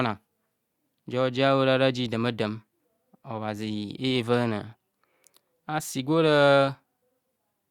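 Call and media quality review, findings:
No audible faults found in this speech recording.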